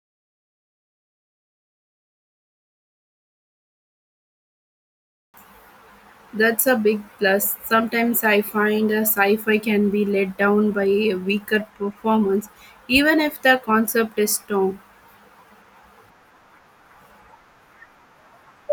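No technical faults are audible anywhere in the recording.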